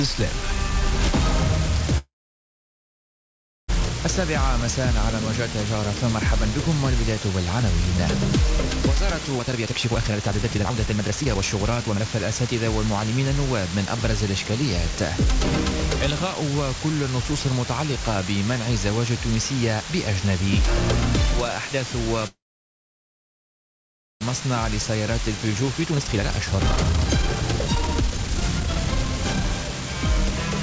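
From start to end a constant, even hiss sits almost as loud as the sound itself. This is low bit depth with dither, which fits about 4-bit resolution, and unlike plain truncation it adds no grainy distortion. From 1.98 to 3.70 s the sound stalls and trails into about 1.6 s of silence, then resumes exactly where it stopped. This is a call audio freeze, likely from delayed packets emptying the jitter buffer, and unlike a dropout nothing is lost. From 9.36 to 16.35 s a jitter buffer speed-up plays the sound at 124% with unchanged pitch, trimming roughly 1.5 s of backlog. This sounds hurried rather than chipmunk-like. From 22.27 to 24.23 s a second call audio freeze holds about 1.8 s of silence, again with nothing missing. From 25.38 to 30.34 s a stronger speed-up runs at 136%, removing about 2 s, all through a G.722 path with nothing above 8 kHz.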